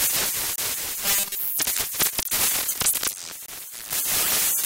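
At 0.56 s, a block of digital silence about 23 ms long cuts the sound out and back with no fade, which fits one unfilled 1024-sample buffer. It is a short hole, not a buzz.

From 1.05 to 1.39 s comes robotic sound from repeated short buffers. A rigid 200 Hz metallic buzz replaces the natural texture, likely from a 5 ms buffer repeated over most of this stretch. Unlike a gap, the sound never drops out.

The same 23 ms block of digital silence recurs at 2.23 s and 3.46 s, each cutting out and back just as abruptly.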